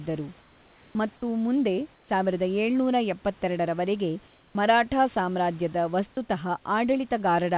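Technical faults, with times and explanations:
0.41–0.95 s, 1.94–2.09 s and 4.28–4.55 s, comfort noise in place of the background: the pauses before "ಮತ್ತು ಮುಂದೆ ಸಾವಿರದ ಏಳುನೂರ", after "ಮತ್ತು ಮುಂದೆ" and before "ಮರಾಠಾ ಸಾಮ್ರಾಜ್ಯದ ವಸ್ತುತಃ" turn into steady, featureless hiss about 2, 4 and 6 dB quieter. This is likely discontinuous transmission, with synthetic noise standing in for the real room sound. A spectrogram shows smooth, textureless grey below the 4 kHz call-band edge, and the waveform shows an unnaturally even, slightly lowered noise floor.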